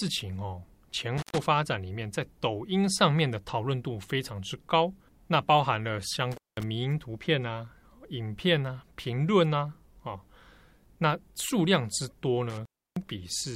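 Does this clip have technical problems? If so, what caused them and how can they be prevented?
Yes: intermittent contact at 1.18–1.38 s, 6.32–6.64 s and 12.50–13.08 s. A loose connection briefly opens, leaving gaps of 120, 196 and 310 ms. On the waveform these appear as flat dropouts, and on the spectrogram as vertical broadband crackle edges. Reseat or replace worn cables and plugs, and strain-relieve the connectors.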